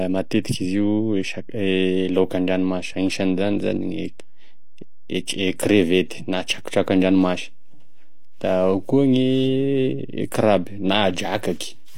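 Nothing about the speech itself gives the fault away, because a DC offset is inaudible as a sound of its own; it shows up instead as steady energy at the very bottom of the spectrum, present from start to end of the clip. The cause is a constant added to every sample, moving the whole waveform off the zero line. That shift eats into headroom, leaving less room on one side before the signal would clip.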